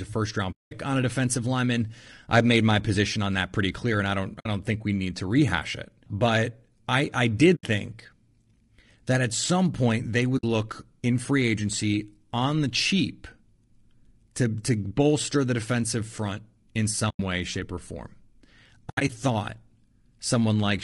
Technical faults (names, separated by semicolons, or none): low-delay AAC compression; AAC frame loss with muting